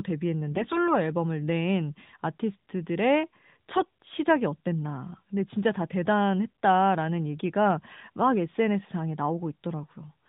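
A speech clip carried over the AMR narrowband mobile codec, whose band limit means nothing above 4 kHz is heard. From 0.50 to 0.90 s there are AMR bit errors: over a weak link a few percent of the lightly protected bits in a run of frames arrived flipped, while the check on the critical bits still passed, so the decoder accepted them. Misplaced excitation pulses and skewed fine gain, pitch and spectral values make the voice turn hoarse, scratchy and gargly there, though pitch and loudness roughly hold.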